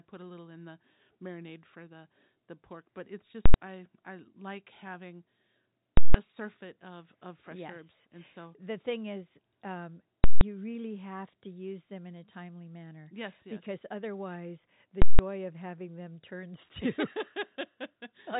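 Invalid numbers at full scale strike at 3.46 to 3.54 s, 5.97 to 6.14 s, 10.24 to 10.41 s and 15.02 to 15.19 s. A calculation returned infinite or invalid values that were pinned to maximum amplitude for a whole block, about 85 ms first and 170 ms after, which fits 4096- and 8192-sample blocks. Each gives a loud pop at both edges with silence between, over telephone-band speech that stops near 3.8 kHz.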